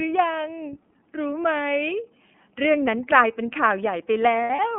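The whole clip has passed through the iLBC codec, which codes each frame on its own at a rate that fits 13.33 kbps in 30 ms frames. The line is limited to roughly 200 Hz to 3.4 kHz, so the speech sounds thin and muffled, with a plainly audible rough, synthetic edge.

From 4.44 to 4.59 s, lost iLBC frames break up the speech. About 90 ms of audio is missing across 150 ms, which fits three lost frames, and the longest gap runs about 70 ms. The decoder fills each gap by repeating the last pitch cycle mixed with noise, so it sounds like a brief held, buzzy vowel. The voice is right again almost at once after.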